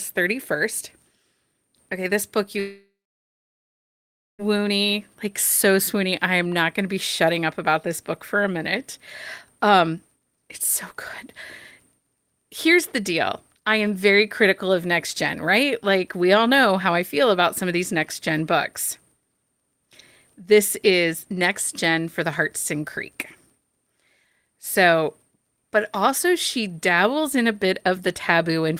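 A long network dropout likely cut off the incoming stream from 2.59 to 4.42 s, just after "this book you". For about 1.8 s no audio arrived, and the receiver tried to cover the gap by stretching the last sound it had. That stretched tail is a brief fading buzz or hiss. Then about 1.5 s of silence or low steady noise follows. The speech resumes further on, with the lost stretch simply gone.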